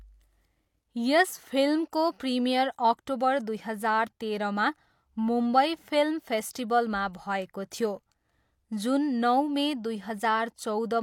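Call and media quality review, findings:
Pre-echo at 6.53 to 6.55 s in speech. Short hiss arrives about 21 ms ahead of a sharp onset. The attack sounds softened and smeared. Probable component: transform codec on the media path. The onset sits late in a coding block. Quantisation noise sized for the loud part spreads across the whole block, filling the quiet gap before it.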